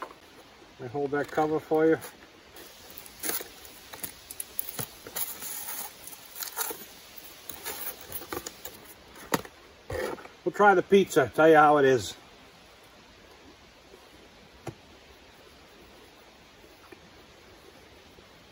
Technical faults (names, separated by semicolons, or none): pre-emphasis left on